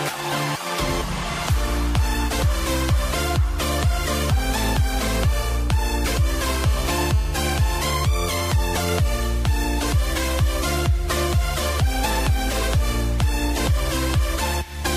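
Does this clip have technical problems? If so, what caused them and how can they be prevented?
Yes: GSM phone buzz from 6.47 to 7.91 s, a raspy, harmonic-rich buzz at about 217 Hz, roughly 16 dB below the signal. A nearby 2G phone on a call pulsed its transmitter at that rate, and the audio circuit rectified the radio bursts. Unlike mains hum at 50 or 60 Hz, it sits at 217 Hz and sounds gritty rather than smooth. Keep phones switched off or in flight mode and away from microphones, cables and interfaces while recording.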